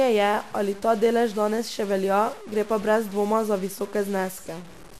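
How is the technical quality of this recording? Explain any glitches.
The technical quality is poor. Three problems can be heard: a distortion that runs through the whole clip, a dull, gurgling codec sound that is also constant, and one short burst of burbling at 2.82 s.

The speech carries distortion from start to finish, and the pauses are filled with noise instead of silence. This is likely a stuck bit: one bit of each sample is held at a fixed value, perhaps by a broken data line or converter. About half the samples end up wrong by that bit's weight, which roughens the waveform. Because the bit also flips with the sign of quiet samples, the gaps between phrases hiss.

Across the whole recording the speech also sounds muffled, with a granular, gurgling texture that is plainly audible. The likely cause is MP2 compression at a low rate, and the sound fits about 80 kbps. MPEG Layer II divides the spectrum into 32 sub-bands and shares out a bit budget among them. 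When that budget is tight, the upper bands drop out or flicker, and the bands that remain are coarsely quantised. That is where the dullness and the gurgle come from.

At 2.82 s, between "še velja gre pa" and "brez dvoma za", there is a brief burst of burbling. This is DAB burbling. With weak reception, a small fraction of a percent of bit errors slipped past error correction into the MP2 data, and the damage hit six frames. The corrupted samples put short blips of noise into individual sub-bands, which gives the burbling sound.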